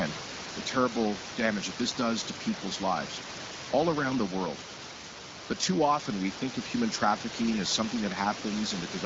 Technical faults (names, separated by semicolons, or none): none